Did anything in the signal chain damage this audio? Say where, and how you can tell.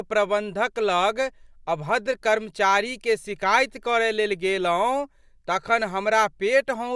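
No, nothing in the signal chain stood out as damaging this speech on listening.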